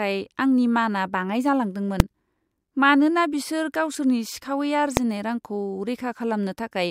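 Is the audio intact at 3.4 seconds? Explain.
Yes, the speech at 3.4 seconds is intact, with no dropout, click, distortion or other fault audible at that moment.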